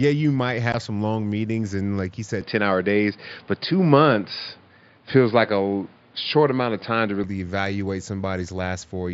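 At 0.72 s, a brief run of unconcealed Bluetooth headset packet loss cuts out audio travelling from the headset to the phone. The gap lasts about 15 ms, which fits two lost packets on the mSBC link. Nothing covered the gap, so silence or an idle pattern filled it. The speech drops into a short hole with abrupt edges and resumes right after, while the mSBC codec around it adds only light coding damage.

From 2.41 s to 7.24 s, the sound changes abruptly, most likely because the input switched to a poorer device partway through the recording. Nothing above 5 kHz gets through during this stretch, so the speech turns dull. A new background noise appears around 40 dB below the speech, and the level shifts by around 5 dB. There is no silence at either transition, and the fuller sound returns just as suddenly at 7.24 s.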